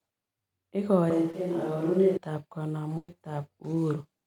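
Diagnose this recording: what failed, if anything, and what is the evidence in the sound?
Between 1.10 and 2.17 s the sound goes roomy and hollow all at once, with the low end thinned out and the background coming up to roughly 30 dB below the speech, while the overall level stays about the same. Then it snaps back just as abruptly. That's a switch to a distant microphone, at the capture stage, most likely the close mic dropping out and a far-off one, like a camera mic, covering that stretch.

Inside that same stretch, around 1.31 to 1.34 s, there's a quick smear where roughly 20 ms of audio never arrived and the decoder papered over it by extending the preceding sound before easing back into the real signal. That's short concealed packet loss on the network side. It's brief enough to read as a little wobble rather than a gap, but whatever was in that slice is gone.

The bigger hit comes at 2.97 to 3.09 s, a burst of packet loss. 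About 110 ms went missing in a row, and the receiver kept the last sound going while fading it down, so you get a held buzz or fading hiss, then around 20 ms of outright silence before the audio picks up further along. It's a network problem again, with the concealment running out of material to stretch.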